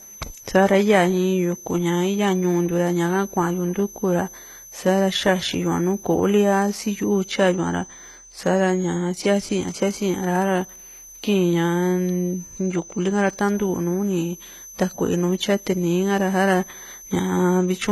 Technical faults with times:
0.00-17.91 switching supply whistle
0.00-17.91 transcoding between lossy codecs

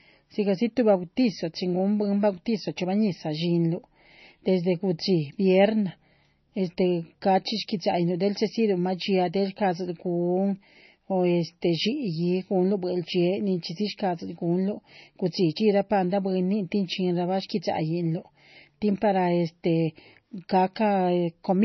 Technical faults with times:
0.00-21.64 MP3 compression

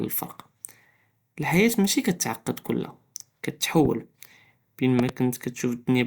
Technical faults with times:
3.85-3.88 loud pop
4.99-5.11 loud pop

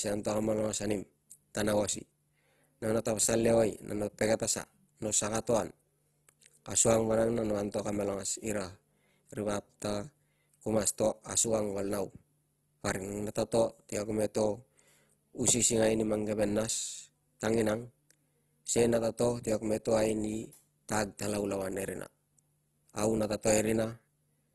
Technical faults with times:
0.00-24.54 Opus compression

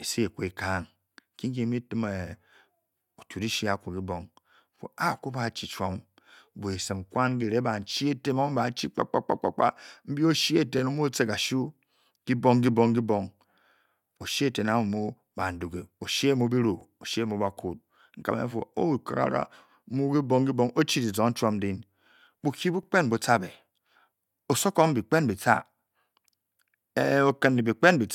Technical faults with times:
4.76-4.79 overlapping chunks
10.79-10.81 overlapping chunks
16.81-16.83 overlapping chunks
22.83-22.85 overlapping chunks

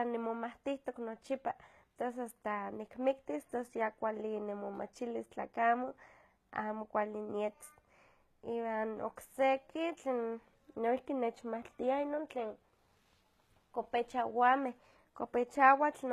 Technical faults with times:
0.00-16.13 HE-AAC compression

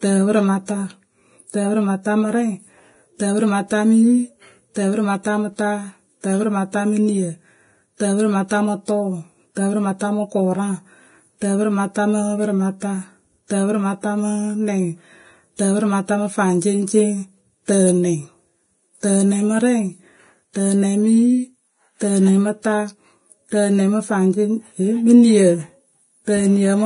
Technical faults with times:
0.00-26.85 Vorbis compression

